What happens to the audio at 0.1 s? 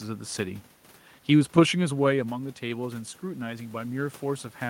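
Nothing goes wrong at 0.1 s; the audio is intact there, with only the room's own background noise present.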